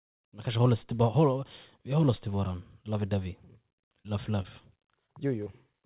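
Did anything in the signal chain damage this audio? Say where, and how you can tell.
Yes. Brief smears at 4.02, 4.42, 5.06 and 5.44 s are short concealed packet loss: roughly 20 ms went missing in the network each time, and the receiver extended the preceding sound.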